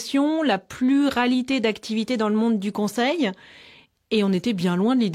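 Nothing in the speech here stands out as a technical fault, so there's nothing to point to along the way.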